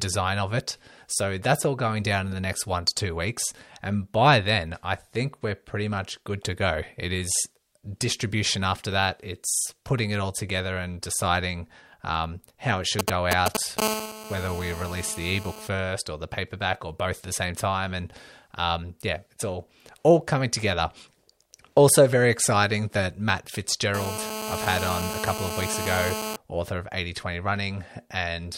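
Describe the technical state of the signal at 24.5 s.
At 24.5 s the speech is overlaid by GSM phone buzz, which runs from about 23.94 s to 26.36 s. A 2G handset close by is transmitting in bursts about 217 times a second. The audio circuitry rectifies those radio pulses and passes them on as sound. The result is a hard, raspy buzz at 216.7 Hz, rich in harmonics and unrelated to the speech. It holds steady, as on a call, at about 6 dB below the signal.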